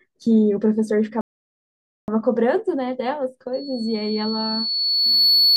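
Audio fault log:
1.21–2.08 s, rebuffering stall: the speech halts into silence for 870 ms and then picks up at exactly the point where it broke off, so nothing is skipped and the clip simply runs longer. That is what separates it from a network dropout or a lost packet, where the gap would swallow part of the audio. Here playback ran dry of downloaded data and waited for more before continuing.
3.53 s to the end, loudspeaker feedback squeal: a single tone at 4.4 kHz rises on its own over roughly two seconds until it sits about 5 dB above the speech. The microphone is hearing the loudspeaker it drives, and at that one frequency the loop gain tops one, so the tone keeps feeding itself. Unlike a constant whine or mains hum, it swells rather than holding steady at a fixed level.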